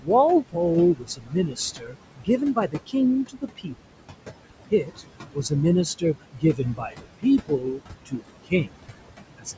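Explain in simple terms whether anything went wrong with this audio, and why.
Noise suppressor artifacts run through the whole clip. The call's noise suppressor keeps judging which parts of the sound are steady background noise and pushing those parts down, moment by moment. The room noise, which sits a little under the speech, therefore doesn't stay level. It dips away in the gaps and comes back underneath the talking. The speech can sound a bit thin.

Speech cut by the noise suppressor happens at 0.01 to 0.1 s, 0.94 to 2.95 s, 3.28 to 3.87 s, 4.65 to 5.52 s, 5.98 to 8.87 s and 9.38 to 9.57 s. In these stretches the suppressor mistook quiet pieces of speech, such as soft consonants and word endings, for background noise and turned them down too. Those bits sound swallowed or faint. The longer stretches each lose around a second of sound in total.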